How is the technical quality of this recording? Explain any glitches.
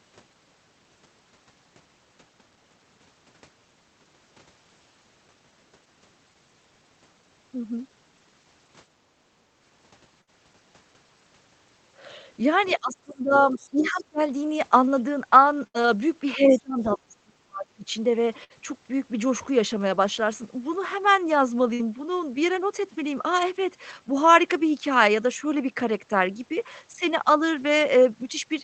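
The recording has several call-path glitches. The audio is band-limited, which fits a wideband call codec at a modest bitrate.

Background gated by the echo canceller, 9.32 to 9.43 s: The canceller pulled the microphone down while the loudspeaker played. The room sound dips by about 8 dB, then returns.

Burst of packet loss at 10.21, 15.67, 18.44 and 21.74 s: Each time, about 60 ms of audio never arrived. The receiver stretched the last sound for 55 to 70 ms, giving a brief fading buzz or hiss, then jumped ahead.

Speech suppressed in double talk, 12.77 to 13.34 s, 13.52 to 14.21 s and 16.35 to 17.85 s: The talker's voice drops sharply, by around 30 to 35 dB at worst. The likely cause is both sides talking at once, so the canceller turned everything down.

Other side's voice leaking through, 13.58 to 13.69 s and 13.94 to 14.02 s: Faint scraps of a second voice appear, roughly 30 dB below the talker. 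This is likely residual loudspeaker echo the canceller missed.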